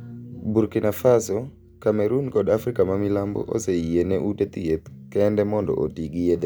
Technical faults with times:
none

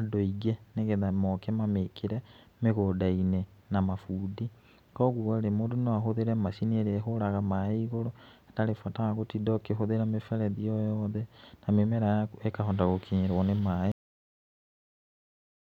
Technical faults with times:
13.92-15.75 cut-off end

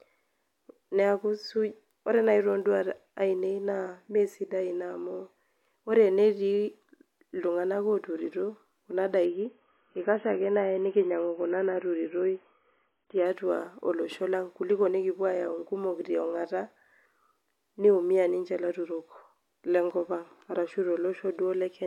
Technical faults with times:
9.25-13.25 adaptive stream at a lower bitrate

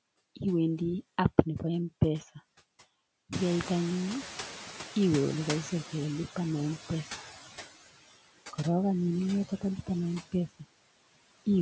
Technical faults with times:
0.00-11.61 noise suppressor artifacts
3.32-7.29 noise suppressor catching up

